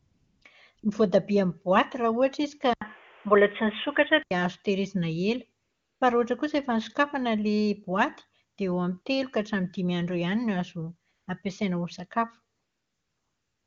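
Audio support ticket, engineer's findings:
AMR comfort noise at 0.00–0.41, 0.75–0.77, 0.79–0.83, 5.63–6.01, 8.55–8.57, 9.01–9.05, 11.11–11.27 and 12.55–13.67 s. The DTX side stopped sending speech frames, so the receiver swapped the real background for smooth synthetic hiss that gates in and out.

Input switched to a poorer device, 2.73–4.31 s, right before "azo tahirizina". There's an 80 ms dropout at the switch, then the sound goes dull with nothing above 3.6 kHz, a level shift of roughly 5 dB and new noise about 30 dB down. That's likely a move to a headset call profile.

The AMR-WB path itself sounds clean, which fits a high rate around 23.85 kbit/s.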